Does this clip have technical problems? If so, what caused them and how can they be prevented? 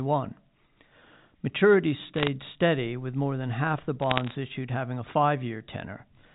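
Yes. Bit errors on a digital phone line cause bursts of sharp ticks and crackle at 2.16–2.28 s, before "steady with more than", and 4.02–4.32 s, between "more than half the" and "issued having a". Each flipped bit corrupts one sample. Error correction or a cleaner transmission link prevents this.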